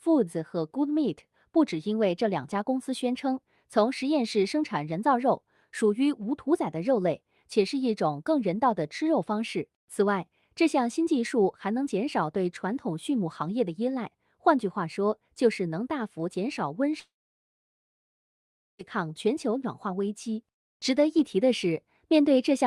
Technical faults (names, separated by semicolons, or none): long network dropout